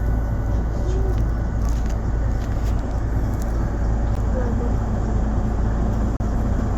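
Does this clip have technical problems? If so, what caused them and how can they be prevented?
Yes. There are two gaps between stream segments. A short hole of silence with hard edges appears at 4.15 s. A longer one runs from 6.17 to 6.20 s. The time stamps of neighbouring segments, which are 1.0 s long here, do not quite meet. The player fills the missing time with silence, about 14 ms and 33 ms. No audio is lost; it is only pushed later. Prevention: make each segment's time stamps continue exactly from where the previous segment ends.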